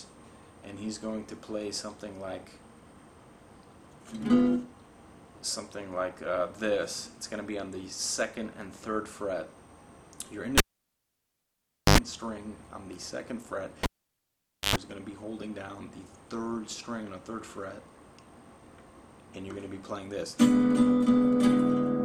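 A live cable is pulled and plugged in twice, at 10.58 to 11.98 s and 13.83 to 14.76 s. Each time a pop cuts the sound to near silence for 1.36 s, then 0.87 s. A brief 50 Hz mains buzz of 84 ms, then 103 ms, precedes the pop where the sound returns.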